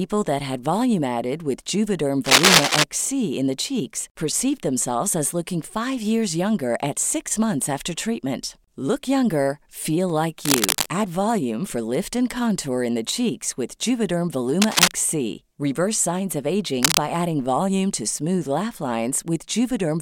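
Four bursts of cable scratch noise sit over the speech. The first runs from 2.25 to 2.84 s, ending just before "in the cheeks perceived". The second runs from 10.45 to 10.86 s, right after "younger feel like". The third runs from 14.62 to 14.91 s. The last runs from 16.83 to 16.99 s, between "signs of" and "adding volume to smooth". Each is a dense, ragged scratching, a little louder than the voice, except the second, which is about level with it. The likely cause is a worn cable or connector being moved, so its contact resistance flickers rapidly.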